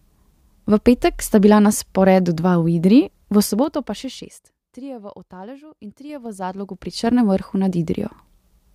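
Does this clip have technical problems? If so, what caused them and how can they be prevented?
Yes. Zipper noise appears from 3.37 to 4.69 s, while the speech level drops by roughly 20 dB, and again from 6.01 to 7.18 s as it climbs back by a similar amount. The gain moves in unsmoothed 3 dB jumps, roughly five to seven per second, and each jump leaves a small click, heard as ticking over the speech. Ramping the gain smoothly per sample instead of stepping it prevents this.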